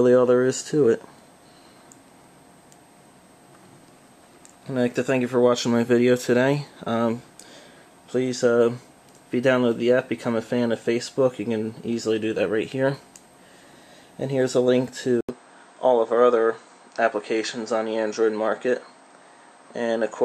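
At 15.21 s the audio drops out for 80 ms, then runs band-limited to 8.8 kHz with new background noise around 45 dB down, likely an input switched to a poorer device.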